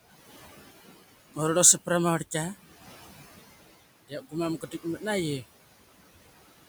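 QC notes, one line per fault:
Throughout: noise suppressor artifacts. The suppressor pulls steady room noise down by about 15 dB frame by frame, so the background pumps around the speech.
4.08–4.34 s and 4.61–5.03 s: speech cut by the noise suppressor. It mistook quiet speech for noise, dropping it by up to about 16 and 11 dB, so sounds come out swallowed.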